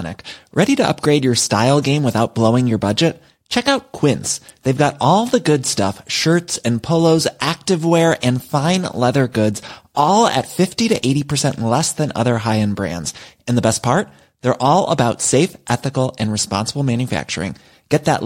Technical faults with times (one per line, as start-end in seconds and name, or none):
none